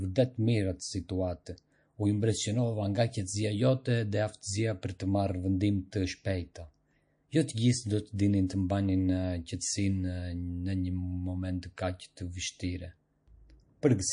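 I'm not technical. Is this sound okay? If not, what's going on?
No. MP3 compression, running through the whole clip, is the main problem. The speech has a watery, swirly quality, and the crisp top end sounds dulled. This is likely from the file being saved as a heavily squeezed MP3. To save space, the encoder throws away detail it thinks you won't miss. Faint parts of the sound flicker in and out from moment to moment, and the high frequencies are simply cut off.

Pre-echo happens twice, at 8.15 s, between "të gjithë do" and "dinin të", and again at 8.47 s. A brief hiss, about 30 milliseconds long, arrives just before a sharp sound begins. The compression works on short chunks of audio and spreads its noise evenly across each one. When a sudden loud onset falls late in a chunk, that noise leaks into the quiet moment before it, so the onset sounds blurred.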